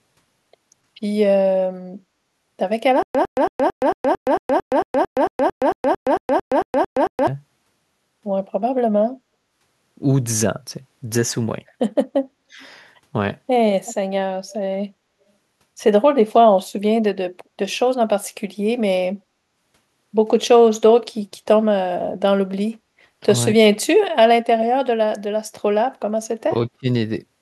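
From 3.03 to 7.27 s there is a stutter with silent gaps: a 105 ms burst of the same sound repeats about nineteen times, each followed by 120 ms of digital silence, a steady 225 ms cycle. The playback likely stalled and replayed its last fragment at each retry, so the audio due in that span is lost. A waveform shows identical blocks separated by flat silent stretches, and a spectrogram shows matching columns with blank gaps between them.

At 12.46–12.6 s comes speech suppressed in double talk, a sudden dip of roughly 25 dB lasting about 150 ms. The echo canceller likely confused the local talker with loudspeaker echo while both sides spoke, and turned the signal down. On the waveform the envelope abruptly pinches. On a spectrogram the energy fades.

Echo leak follows at 12.61–12.67 s and again at 13.85–13.94 s. A delayed copy of the speech, 277 ms late, comes back faint at first and then noticeably louder, roughly 20 dB under the speech. 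It likely comes from a loudspeaker's pickup that the far-end canceller failed to remove. A spectrogram shows faint, smeared repeats of earlier harmonic patterns offset in time.

The same double-talk suppression returns at 23.76–23.84, 26.47–26.55 and 26.73–26.87 s. These are short bites of roughly 20 to 35 dB, the last lasting about 150 ms, and they show as notches in the waveform envelope.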